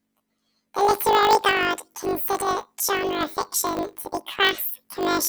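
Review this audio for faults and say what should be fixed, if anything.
Planar audio read as interleaved, throughout the speech. Each 20 ms block stores all left samples and then all right samples, but the reader takes them as alternating left-right pairs. Each block therefore plays twice at double speed, once from the left half and once from the right. The pace of the speech stays correct. Within each block the sound is raised by 12 semitones, but because the blocks are so short the result is a robotic buzz at 50 Hz rather than a clear octave jump.

To prevent it, check the sample layout flag at the decoder or buffer boundary and convert planar data to interleaved before playback.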